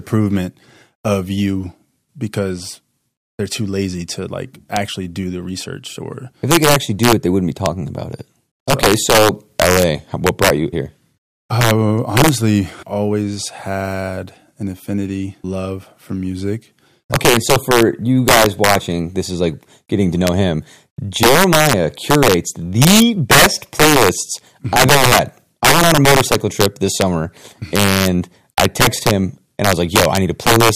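Speech runs through the whole clip with integer overflow on its loudest moments. The signal is pushed about 10 dB too hot, and instead of being limited, the peaks that exceed the maximum integer value wrap around to the opposite extreme. Roughly one percent of samples do this, producing violent cracks far harsher than ordinary clipping. On a waveform, peaks jump abruptly from the top rail to the bottom. A spectrogram shows full-band vertical streaks at each crack.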